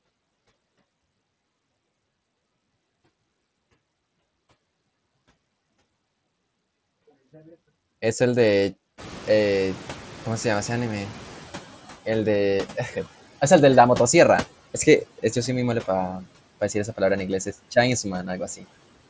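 A speech recording in which the room noise jumps by about 20 dB around 9 s, and the noise suppressor is caught catching up: from 8.97 to 11.63 s the louder background passes with little reduction, then sinks by about 9 dB over 2.66 s as the suppressor's noise estimate adapts to the new level. Near the end, from 18.56 to 18.66 s, there is speech cut by the noise suppressor, which mistakes part of the speech for noise and pulls it down by up to about 13 dB for roughly a tenth of a second, so the sound there comes across swallowed and faint.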